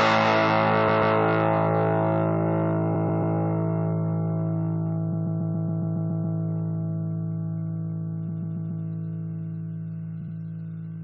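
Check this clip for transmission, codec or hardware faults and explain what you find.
One fault type turns up: repeated frames, in five places. At 0.87 to 1.15 s, 2.94 to 3.36 s, 5.12 to 6.37 s, 8.28 to 8.84 s, and 10.21 to 10.35 s, the sound stutters. A short block of compressed frames was sent again, so the decoder plays it over. Most blocks last 139.3 ms. The last lasts 69.7 ms. Each join where the frames don't match can click. The worst run, at 5.12 s, loops nine extra times and adds 1.25 s.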